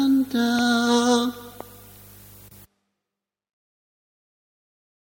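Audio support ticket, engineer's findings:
Loud pop at 0.59–0.61 s and 1.61–1.63 s, each a single spike a few dB above the audio, which continues underneath. Likely a voltage transient from a switch or driver glitch. Appears as a thin full-height stripe on the spectrogram.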